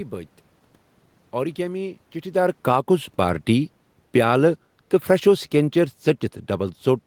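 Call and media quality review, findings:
Automatic gain falling, 1.34 to 4.35 s: level sags about 7 dB over three seconds, with the room noise sinking right along with the speech. The AGC judged the input too hot or too noisy and eased gain down. It's not just the talker shifting around 2.5 s.

Automatic gain rising, 2.78 to 3.28 s: a quick swell of about 4 dB, speech and background lifting together over half a second. The AGC is pushing gain back up in the middle of its own descent, before the drop carries on.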